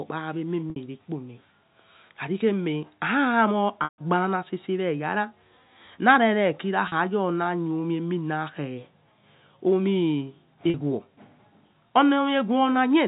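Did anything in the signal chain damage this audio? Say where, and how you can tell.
Yes. At the network stage, packet loss with pitch repetition occurs at 0.70–0.76, 3.84–3.98, 6.88–6.92 and 10.70–10.74 s. The receiver loops the last pitch period, so the short gaps sound held and buzzy. The 140 ms gap fades out into silence before the speech cross-fades back. The gap lengths fit 20 ms packets over the G.711 A-law link.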